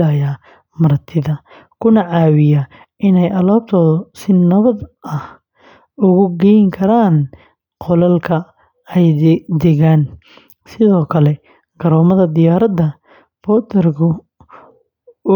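No technical faults occur at any point in the speech, so there is nothing to describe in time order.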